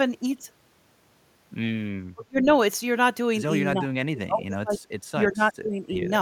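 Speech that is pulled down in three places: 2.14–2.47 s, 3.73–4.79 s and 5.17–6.11 s. The level sinks by about 35 dB, 30 dB and 20 dB respectively, and the voice thins and breaks up. This is likely speech suppressed in double talk, where an echo canceller mistook the voice for loudspeaker echo and attenuated it. On a spectrogram the energy fades, high frequencies first, in ragged patches. The waveform shows the envelope collapsing in chunks.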